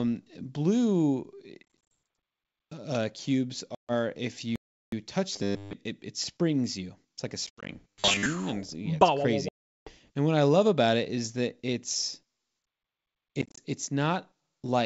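At 1.63 to 1.92 s, packet loss on an ADPCM call drops 140 ms of audio in scattered gaps over 280 ms, the longest 30 ms. Each lost packet becomes silence, and the decoder's adaptive predictor and step size drift away from the sender's. The sound cuts out in hard-edged holes and comes back slightly distorted before settling. The same fault strikes right after "uh cubes" at 3.75 to 3.93 s, losing 140 ms.

At 4.56 to 4.92 s a playback stall silences the output for about 367 ms. The player likely ran short of data or was blocked, so the sound halts mid-flow and resumes only after the gap.

From 5.33 to 5.74 s, just before "it it springs you", the audio turns into a robotic sound from repeated short buffers. Fresh audio likely arrived too seldom, so a short stretch was looped in its place, with most of the real signal skipped. That loop imposes a rigid, metallic 100 Hz buzz, which fits a 10 ms buffer, and the sound follows its original shape only loosely. 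The same buzz returns at 7.90 to 8.26 s.

Packet loss on an ADPCM call recurs at 7.47 to 7.71 s, with 140 ms lost over 220 ms and one 80 ms hole. After "yeah it's", 9.49 to 9.91 s loses a solid 380 ms, about forty packets. At 13.42 to 13.58 s, 100 ms goes in short gaps of up to 30 ms. Each hole is followed by a brief, slightly distorted recovery. Between the faults the G.722 wideband telephone coding stays clean, consistent with 64 kbit/s.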